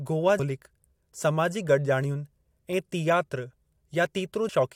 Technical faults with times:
0.38 compressed frames skipped
4.48 compressed frames skipped

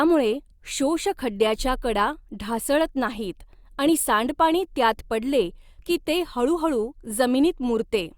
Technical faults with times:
none

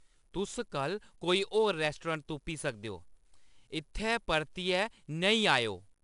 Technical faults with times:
0.00-6.03 4-bit ADPCM compression

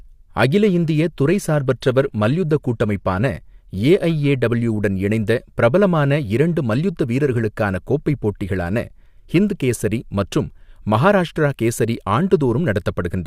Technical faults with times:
1.27-3.27 adaptive stream at a lower bitrate

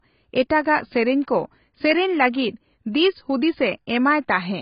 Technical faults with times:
0.00-4.62 AAC compression

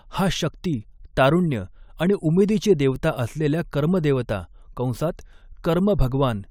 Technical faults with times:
none

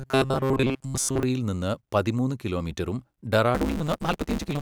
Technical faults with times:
0.01-1.23 robotic sound from repeated short buffers
3.54-4.61 block size mismatch (truncated)

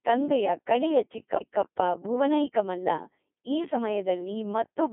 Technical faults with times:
0.00-4.93 Codec 2 vocoder

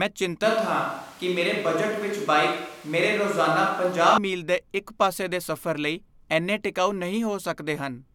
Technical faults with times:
0.45-4.18 switch to a distant microphone

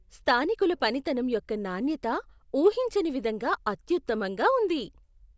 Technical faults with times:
none

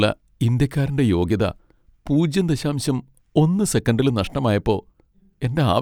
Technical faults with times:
none

